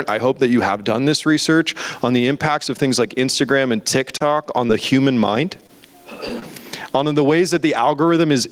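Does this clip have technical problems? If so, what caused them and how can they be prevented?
Yes. Gain pumping runs through the whole clip: loud and soft parts are pulled closer in level and the sound is squashed, with a swing of about 20 dB. On a waveform the noise floor rises between phrases and collapses at each onset, and peaks look flattened. The likely cause is input gain set far too high, with a fast limiter clamping every loud sound. Lowering the microphone gain so the limiter rarely acts would prevent it.

A short stall from a late packet occurs from 4.17 to 4.36 s. The jitter buffer ran dry, so the receiver held the last sound for about 30 ms until the packet arrived, then carried on without losing anything. A spectrogram shows harmonics smeared flat for that instant. A larger or more adaptive jitter buffer would absorb this delay.

Short concealed packet loss happens three times: 4.67 to 4.71 s, just before "human mind"; 5.67 to 5.70 s, just after "human mind"; and 6.40 to 6.44 s, just before "on the ways". 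Each time about 20 ms never arrived, and the decoder filled the gap by extending the previous sound, heard as a brief smear or wobble. On a spectrogram these appear as narrow blurred strips where fine detail briefly goes uniform. Forward error correction or a steadier network path would reduce these losses.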